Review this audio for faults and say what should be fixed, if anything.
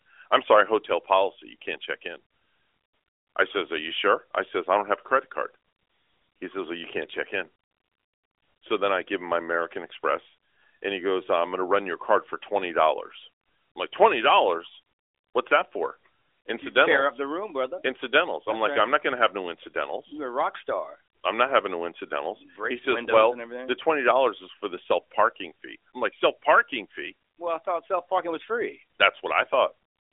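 No faults; nothing to fix.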